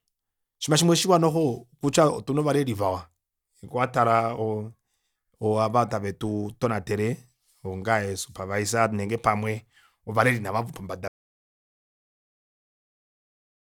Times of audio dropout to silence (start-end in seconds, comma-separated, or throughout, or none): 11.08-13.68